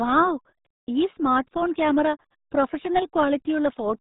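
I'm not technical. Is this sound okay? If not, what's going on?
No, the speech has been squeezed through the RealAudio 14.4 codec, an old dial-up format. Everything above about 3.8 kHz is gone, so it sounds muffled and gargly throughout.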